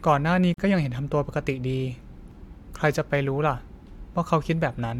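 At 0.54 s the speech drops out for about 42 ms, until 0.58 s. This is a gap at a join of encoded pieces. Two separately encoded sections were joined untrimmed, so encoder delay and end padding remain. The silence has smeared edges, then the speech resumes where it stopped.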